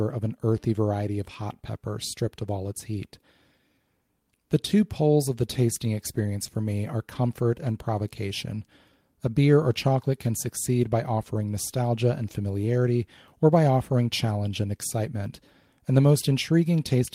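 Nothing in the speech stood out as a technical problem on listening.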